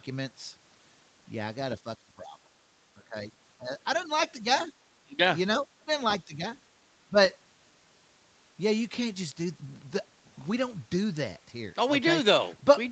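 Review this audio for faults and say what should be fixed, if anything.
The speech dips and thins in pieces, by up to about 15 dB, at 1.84–2.37 s, across 2.96–6.44 s and briefly at 7.09–7.17 s. This is likely speech suppressed in double talk: with both sides talking, the echo canceller mistook the talker for loudspeaker echo and attenuated both. Better double-talk detection, or a headset that keeps loudspeaker echo out of the microphone, would prevent it.

A faint second voice comes through at 3.97–4.67 s, roughly 30 dB below the talker, and more audibly at 5.92–6.14 s, about 20 dB down. This is likely the other side's voice leaking through, because the echo canceller left part of the loudspeaker signal in the microphone pickup. Stronger residual-echo suppression or headphones instead of a loudspeaker would prevent it.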